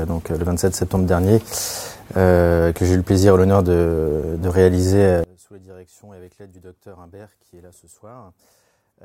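From 5.24 s to the end, the audio drops by about 27 dB and turns faint. Centred sound and bass nearly vanish. The likely cause is one channel inverted in polarity, so the shared content cancels when summed to mono.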